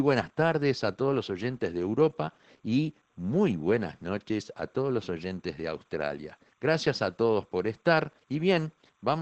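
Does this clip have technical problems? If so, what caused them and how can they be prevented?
Yes, two faults run through the whole clip.

Timecode bleed: linear timecode from a neighbouring track or cable has leaked into the speech path. That code is a square wave flipping between two pitches, here around 1 kHz and 2 kHz, with a pattern that fits 30 frames per second. The result is a faint, steady chirping warble, roughly 40 dB below the speech, sitting behind it from start to finish. To prevent it, route and shield timecode lines away from audio cabling and keep timecode tracks muted in the mix.

Opus voice compression: the audio has passed through the Opus codec's SILK speech coder at a low bitrate. The sound fits roughly 12 kbps in wideband mode. SILK models the voice by linear prediction and codes the excitation coarsely at this rate, and the band is cut so that nothing remains above about 8.5 kHz. 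The speech therefore sounds plainly muffled, slightly hoarse and faintly robotic throughout. To prevent it, encode at a higher bitrate, or keep an uncompressed master for anything beyond live transmission.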